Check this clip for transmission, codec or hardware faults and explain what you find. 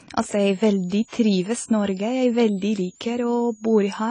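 Two faults are present in this speech clip: codec damage across the whole recording, and a high whistle from a switching power supply.

The AAC compression damage runs throughout. Nothing reaches above 10 kHz, and the speech sounds dull and smeared, with a warbling, fizzy edge on sibilants. This is likely low-bitrate AAC-LC, where coarse quantisation lowers the cut-off and thins the upper bands; the damage fits roughly 24 kbps.

The switching supply whistle enters at 0.40 s and lasts to the end. It is a thin tone around 7 kHz, wandering between 6.47 and 8.23 kHz, roughly 30 dB below the speech. Its drifting pitch fits a supply in burst mode whose frequency shifts with load.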